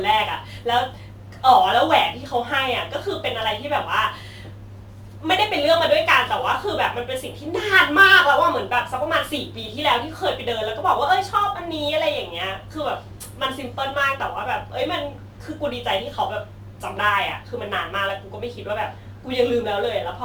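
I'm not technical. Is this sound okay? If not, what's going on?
No. Sample clock jitter runs through the whole clip. The recorder's timing wobbles slightly, adding a hiss that rises when the speech gets louder or brighter.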